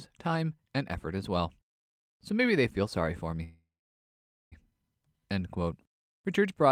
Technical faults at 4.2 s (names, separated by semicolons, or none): call audio freeze